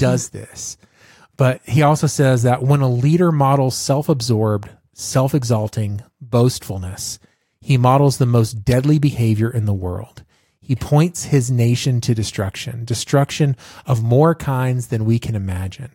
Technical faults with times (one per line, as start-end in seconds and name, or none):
none